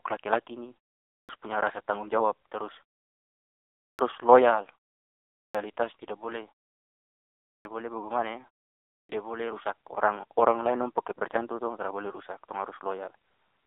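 Throughout the speech, the AMR narrowband mobile codec is at work. Nothing passes above 3.8 kHz, with the line band running from about 300 Hz to 3.7 kHz. The heavy buzzy, synthetic texture fits a low rate near 6.7 kbps, which separates it from simple telephone band-limiting.

Clipped starts after a pause occur at 1.18, 3.88, 5.43, 7.54 and 8.99 s. Each time, the output device has dozed during the silence and loses about 0.1 s of the returning speech, so it begins abruptly. Muted pauses would drop only background, never the start of speech.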